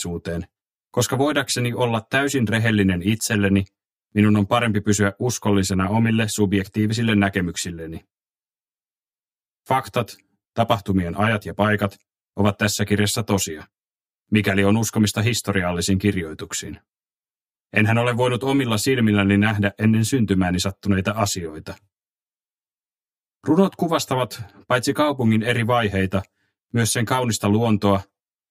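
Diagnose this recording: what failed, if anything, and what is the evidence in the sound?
What's gone wrong is channel delay, giving comb filtering across the whole recording. One channel lands around 10 ms late, likely from a buffer offset at the driver stage, and the mono sum cancels from roughly 50 Hz upward at evenly spaced notches. That's why everything sounds hollow and phasey.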